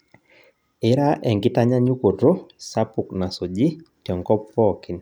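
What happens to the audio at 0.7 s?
At 0.7 s the speech carries on cleanly, with no dropout, click, distortion or other fault at that point.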